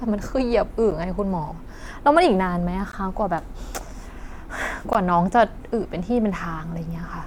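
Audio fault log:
0.91, 2.92 and 4.93 s, gap at a join of encoded pieces: the speech drops out briefly every 2 s, for 8.7 ms and then 16 ms, with smeared edges, before resuming where it stopped, because separately encoded pieces were joined untrimmed, keeping each piece's encoder delay and end padding.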